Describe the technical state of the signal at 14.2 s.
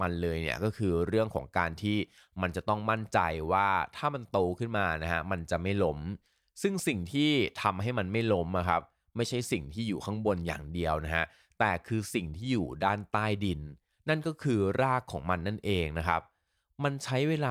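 At 14.2 s the speech signal is intact, with no fault present at that moment.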